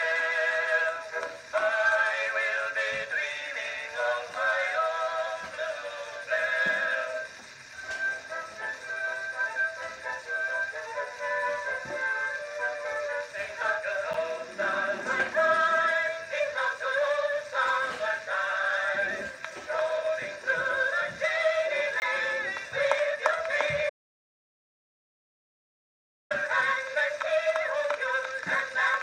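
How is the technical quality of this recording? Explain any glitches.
There are three glitches, two tiny and one long.

At 14.13 s and 22.00 s you get a block of digital silence, about 10 ms and 20 ms long. A stretch of samples was zeroed, which fits the output buffer missing its deadline. The hard edges make the first one a quick tick.

From 23.90 s to 26.31 s there's an audio dropout to silence lasting about 2.4 s. The sound cuts out abruptly to silence with no room tone, then snaps back. The likely cause is the input being lost while recording carried on, and whatever happened in that window is gone.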